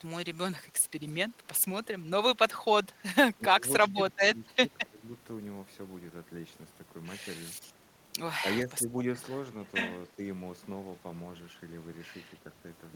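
At 1.06 to 1.13 s a very faint, delayed copy of the speech, roughly 35 dB below it and trailing by 280 ms, slips through: an echo leak, likely from a loudspeaker's pickup that the far-end echo canceller did not fully remove. The fixed lag marks it as an echo rather than room reverberation.

Speech suppressed in double talk follows at 3.38 to 3.63 s, 3.86 to 3.93 s, 4.16 to 4.68 s, 4.86 to 5.02 s, 8.66 to 8.89 s and 10.11 to 10.21 s. The voice dips by roughly 10 to 20 dB in brief chunks, likely because an echo canceller mistook overlapping talk for echo and attenuated it. Unlike dropouts, the voice is ducked rather than lost.

From 9.16 to 12.33 s the recording switches to a distant microphone, likely after the close microphone dropped out. The sound turns suddenly hollow and roomy, with thinner bass, about 5 dB lower, and background noise only about 25 dB below the speech. This differs from echo leak because there is no delayed copy, only a sustained change in tone and room sound.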